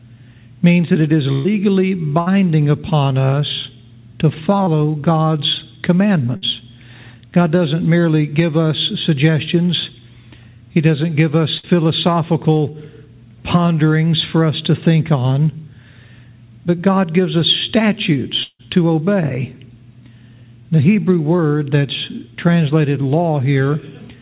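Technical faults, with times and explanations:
1.32 to 1.47 s, 2.21 to 2.28 s, 6.37 to 6.44 s and 11.58 to 11.65 s, burst of packet loss: several consecutive packets failed to arrive in time, about 120 ms at 1.32 s and about 60 ms at each of the others. The receiver stretched the last sound into a held buzz or hiss that fades, and playback resumes further on with that stretch missing. Unlike the short losses, the filled stretch is long enough to hear as a held sound rather than a blip.
4.64 to 4.69 s and 21.37 to 21.40 s, short concealed packet loss: only about 20 ms went missing each time, and the decoder patched it by continuing the preceding sound for roughly 15 to 25 ms before blending back into the real signal. The result is a quick smear or wobble rather than a held buzz. A brief transient may vanish. The patch sits within the 4 kHz band of the G.711 call path.
18.43 to 18.61 s, long network dropout: about 160 ms of sound never arrived, likely an interruption in the network rather than a handful of lost packets. 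The concealment carries the last sound forward as a decaying buzz or hiss, and it gives out before the signal returns, leaving about 40 ms of silence. That silent tail sets this event apart from the first burst, where the fill lasts right up to the point where playback resumes.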